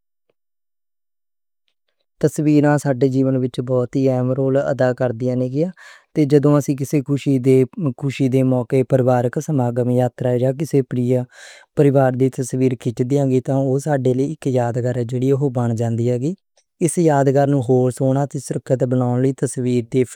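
A recording of speech, with no technical fault to be heard anywhere in it. Nothing stands out at any point, so there are no times or causes to report.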